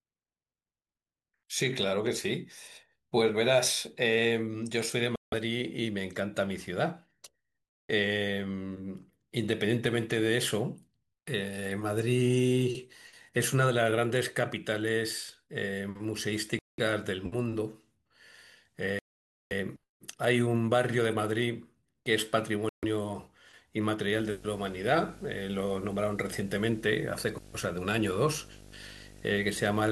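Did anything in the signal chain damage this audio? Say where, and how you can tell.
Yes. Bluetooth stall at 5.16, 7.69, 16.59, 18.99 and 22.69 s: silence of 0.14 to 0.52 s, then resumption, likely a playback buffer running dry.

Video or display buzz from 24.12 s to the end: a 50 Hz buzz and 15.6 kHz whine, around 20 dB below the speech, coupled into the analogue wiring.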